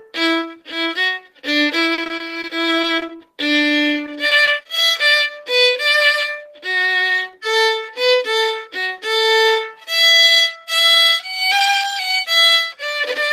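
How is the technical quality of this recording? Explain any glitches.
The recording has two bursts of repeated packet loss (robotic sound), from 1.94 to 3.19 s and from 4.06 to 4.67 s. Short, closely spaced gaps, none longer than 40 ms, were patched by stretching the preceding sound, leaving choppy audio with fragments missing.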